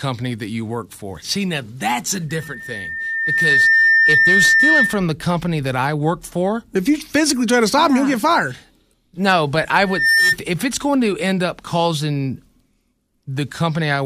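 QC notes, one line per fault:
2.29–5.07 s, loudspeaker feedback squeal: after "now that's a", a 1.8 kHz tone swells over roughly a second and a half to sit about 5 dB above the speech, because the microphone is re-amplifying its own loudspeaker with loop gain above one at that frequency. It clears before "the company that I".
9.83–10.36 s, loudspeaker feedback squeal: the same 1.8 kHz tone returns after "but I", building in about a third of a second and peaking around 5 dB over the speech. The same runaway loop resonance is briefly re-established, then broken before "if it's going to".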